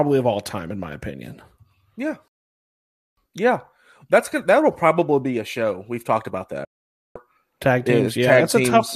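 Digital broadcast dropouts at 2.28 to 3.17 s and 6.65 to 7.16 s: the receiver stopped getting valid frames and muted, so the speech fades out over about 3 ms into silence for 0.89 s, then 0.5 s, and whatever was broadcast in those gaps never comes back.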